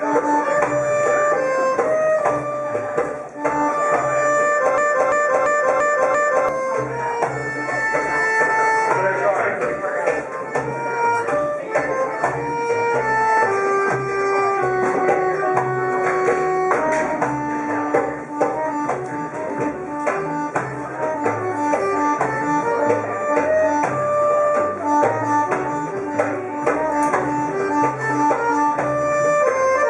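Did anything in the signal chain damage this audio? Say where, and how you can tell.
Yes. A system hang loop at the driver or buffer stage, 4.78 to 6.49 s: one 341 ms slice repeats five times, a stutter at 2.93 Hz, fitting a 16384-sample ring buffer replaying while the host froze. About a second and a half is lost; the waveform and spectrogram show identical stamped blocks.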